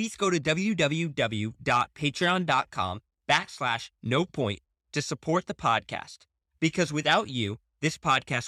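A recording of speech with no audible technical faults anywhere in the signal.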